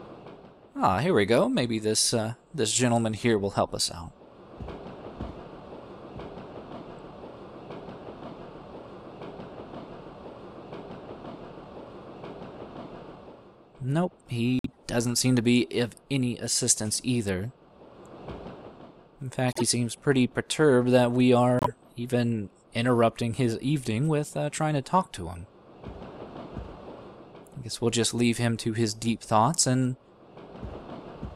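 Corrupt frames got decoded at 3.16–3.21, 14.59–14.76, 19.49–19.63 and 21.59–21.68 s. Flipped bits threw energy onto wrong frequencies, giving short chirpy noise bursts, faint at first, then peaking around -10 dBFS.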